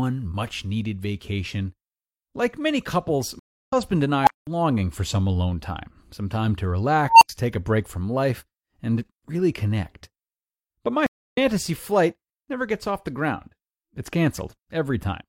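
Speech with two kinds of fault. The first is a stream reconnect, at 3.39 to 3.73 s and again at 11.06 to 11.38 s. The link dropped and playback went silent for 287 ms and 265 ms respectively. When the player re-established the stream and restarted its decoder, the speech picked up from a later point, about a fifth of a second on at the first break and roughly 150 ms on at the second, so a short stretch of speech is simply missing. The second is an unstable filter, at 4.22 to 4.47 s and 7.08 to 7.29 s. A recursive filter stage ran with bad coefficients, so its output fed back on itself and grew without bound. The first event swells into a tone near 700 Hz over 54 ms and the second into one near 1 kHz over 136 ms. Each climbs to clipping, overflows and cuts out, leaving 200 ms and 80 ms of silence until the filter resets.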